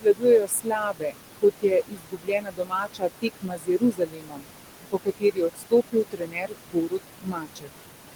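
Noise suppressor artifacts run through the whole clip. The suppressor pulls the room noise, about 10 dB under the speech, down by about 21 dB. The background sinks between the words and rises under them.

Speech cut by the noise suppressor comes in three spans: 0 to 1.22 s, 1.4 to 4.47 s and 4.91 to 7.69 s. The suppressor treats soft speech as noise. Those parts drop by up to about 22 dB and sound faint and swallowed.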